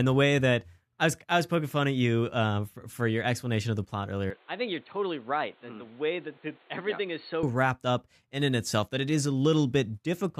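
Speech that turns dull and boxy from 4.30 to 7.43 s, between "explanation of the plot" and "wrapped up in in", with no gap at either switch. Nothing is present above 4.4 kHz, the level drops by roughly 5 dB, and a faint new hiss sits underneath. The input was likely switched to a poorer device. On a spectrogram the upper band cuts off abruptly, and the waveform visibly shrinks.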